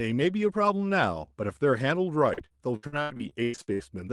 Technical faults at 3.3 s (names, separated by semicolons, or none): repeated packet loss (robotic sound)